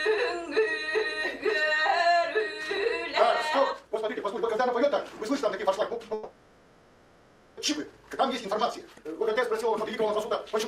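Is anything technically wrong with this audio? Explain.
Yes, there are two faults. From 3.66 s to the end, the audio suddenly rushes along at twice its earlier pace, yet its pitch stays unchanged. That is a time-stretched section, likely software squeezing the audio to fit a length by dropping short pieces to hold pitch.

From 6.13 s to 7.60 s, the audio gives way to a fading buzz or hiss carrying on the last sound, with no true silence. When it resumes, about 1.44 s has gone missing. This points to a long network dropout, likely with the receiver filling the whole gap itself.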